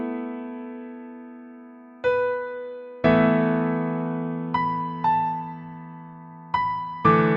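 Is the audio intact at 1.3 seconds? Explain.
Yes, at 1.3 seconds the audio plays through cleanly, with no dropout, click, distortion or other fault at that point.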